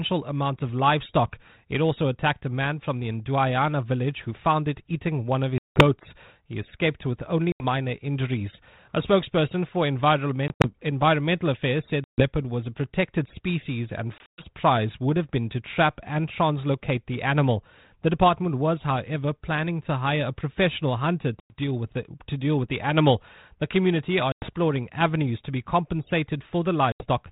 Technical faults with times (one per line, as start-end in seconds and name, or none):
5.58-5.83 packet loss on an ADPCM call
7.52-7.65 packet loss on an ADPCM call
10.48-10.69 packet loss on an ADPCM call
12.04-12.28 packet loss on an ADPCM call
14.18-14.45 packet loss on an ADPCM call
21.40-21.59 packet loss on an ADPCM call
24.32-24.49 packet loss on an ADPCM call
26.92-27.07 packet loss on an ADPCM call